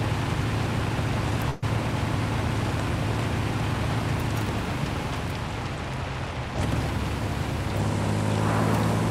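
From 1.49 to 1.64 s the sound stalls, its last moment stretched and fading for about 130 ms before the audio jumps ahead, about 120 ms missing. This is a burst of packet loss: consecutive packets were lost or arrived too late, so the receiver extended and faded the last sound.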